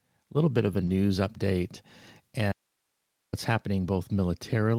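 At 0.85 s a brief smear passes through the speech, lasting about 40 ms to 0.89 s. This is a short concealed packet loss. About 20 ms of audio never reached the decoder in time, and the receiver covered the hole by extending the preceding sound before blending back into the real signal. Overlapping its second half, from 0.87 to 0.89 s, the sound turns rougher and noisier. That is a lost packet rebuilt from error correction. One 20 ms packet went missing, but the following packet carried a low-bitrate copy of it, and the decoder played that copy in place of the original.

From 2.52 to 3.33 s the speech cuts off abruptly and returns just as suddenly. For those 0.81 s only a faint hiss remains, sitting roughly 50 dB below the normal level. The hard edges set it apart from a natural pause or a fade. This is an audio dropout to a faint residue. The wanted signal most likely disappeared while the path after the break stayed open, so the only thing left to pass through was the background noise of the live chain.

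At 3.95 s a second 20 ms stretch, ending at 3.97 s, turns briefly grainy in the same way. It is another lost packet rebuilt from error correction. Again a single packet was lost, and the decoder filled its slot with the coarser backup copy carried in the next packet. That leaves no gap, only a short patch of roughness.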